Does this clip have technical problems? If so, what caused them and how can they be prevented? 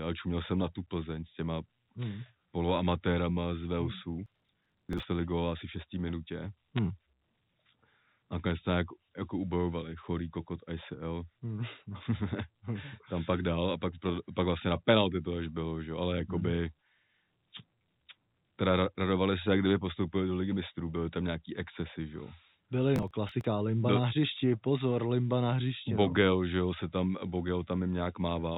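Yes. From 4.26 to 5.03 s, and again from 22.96 to 23.45 s, a gritty crackle tears across the speech. This is processor overload crackle. Audio buffers of about 10 ms each missed their processing deadlines and were skipped, leaving many tiny hard-edged gaps in a row. Lowering the processing load or using larger buffers prevents it.

Between 6.77 and 6.79 s, sharp ticks cut into the speech. These are bit errors on a digital phone line, where flipped bits on the G.711 A-law telephone link corrupt individual samples. Each ticking sample suggests a hit on a sign or high-order bit. Using a cleaner line or a transport with error checking prevents it.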